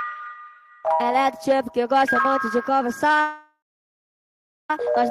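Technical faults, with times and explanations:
3.21–4.71 s, call audio freeze: packets were likely held up in transit and the jitter buffer ran dry, so the last sound is stretched into a fading buzz, then 1.13 s of silence. Playback resumes where it stopped, with nothing lost but now running 1.48 s late.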